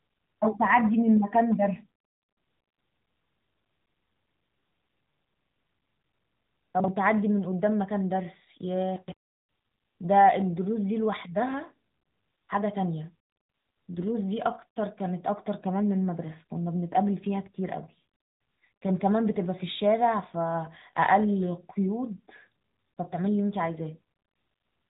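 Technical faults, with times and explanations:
throughout: AMR narrowband mobile codec. The speech has been squeezed through a 2G/3G-style phone codec that rebuilds the voice from a vocal-tract model excited by a few pulses per subframe. Nothing above 3.8 kHz survives, so the sound is dull and boxy, and the coarse excitation makes the codec damage plainly audible as a buzzy, synthetic edge. The amount of artefact points to a mid-rate mode of around 10 kbps.
6.80 to 6.88 s: chunks out of order. Across these 80 ms, two adjacent 40 ms blocks of audio play in swapped order, because one block arrived or was written one chunk late and lands after its successor. No audio is missing, but the sequence is scrambled and there are three abrupt joins, heard as a brief garbled stutter.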